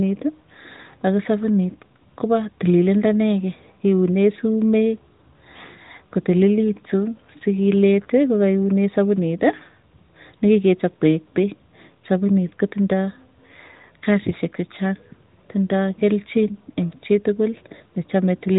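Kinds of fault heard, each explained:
Nothing here calls for a fault entry; the speech comes through steady, with no dropouts, clicks or glitches to point to.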